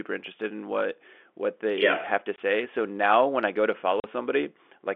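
After "they yeah have to" (2.36–2.38 s) and "when I go to" (4.00–4.04 s), packet loss filled with silence leaves hard-edged dead gaps of 20 and 40 ms, which fits one and then two 20 ms packets. The gaps are true silence, not smeared or repeated sound.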